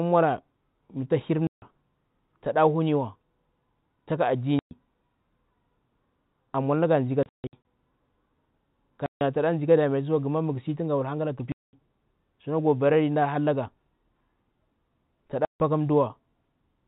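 Packet loss filled with silence cuts the speech at 1.47–1.62, 4.59–4.71, 7.23–7.63 (scattered gaps after "na ga ndzi ka"), 9.06–9.21 (just before "tana ndzi ka damatisiwa"), 11.52–11.73 and 15.45–15.6 s. Hard-edged holes of 120–210 ms, fitting lost 30 ms packets. They show as flat-line gaps in the waveform and blank vertical bands on a spectrogram.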